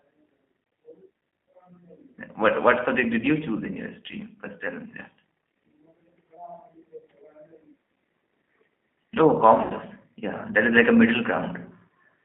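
Throughout, the speech sounds narrow, slightly rough and synthetic, with nothing above 3.5 kHz or below 200 Hz. That points to the G.729 codec at a rate near 8 kbit/s, rebuilding each frame from a coarse vocal model. From 9.62 to 9.72 s the speech smears into a fading buzzy tone or coloured noise and stays weak briefly afterwards. This is VoIP packet loss concealed by the speech codec: about 80 ms of audio went missing, which fits four lost packets, and the decoder stretched its last pitch and filter while lowering the gain.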